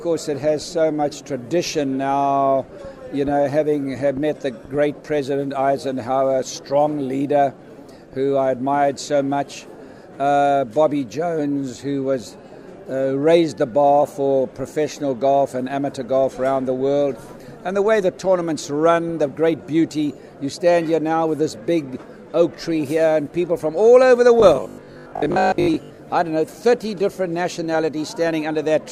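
From 24.40 to 25.98 s the audio takes on a robotic sound from repeated short buffers. A rigid, metallic buzz at 50 Hz sits on top, with roughly half of the passage made of repeats, likely because new audio arrived too seldom and each 20 ms fragment was replayed to fill the gap. Unlike a plain dropout, nothing goes silent, and unlike a stutter loop the sound still moves forward underneath that fixed pitch.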